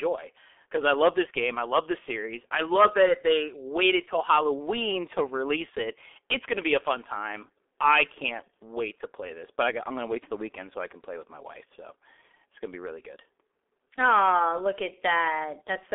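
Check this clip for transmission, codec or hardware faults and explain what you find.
There's one fault, and it runs the whole way through. It's the G.723.1 codec: coarse 30 ms frames at a rate that sounds like roughly 6.3 kbit/s leave the speech hoarse, muffled and smeared, with nothing above 3.7 kHz.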